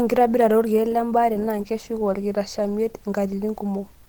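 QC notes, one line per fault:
Throughout: Opus compression. The speech sounds hoarse and muffled, with plainly audible coding damage. Nothing lies above about 20.2 kHz. The hoarse texture points to Opus hybrid mode near 16 kbps, likely from heavy low-rate encoding.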